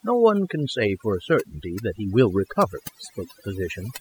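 Overdone noise removal runs through the whole clip. A noise reduction stage was set too strong. It pushes individual frequency bands far down whenever they sit near its noise estimate. The background drops and breaks up into twinkling specks. Quieter parts of the speech vanish too.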